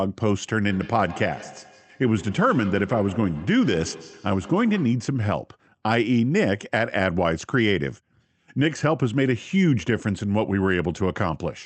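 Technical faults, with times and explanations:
0.67 to 5.14 s, feedback echo between two devices: a second device replays the call, and the first microphone re-captures it beyond its echo canceller's reach, so the speech returns as a thin, ringing copy roughly every 150 ms, peaking about 17 dB below the speech.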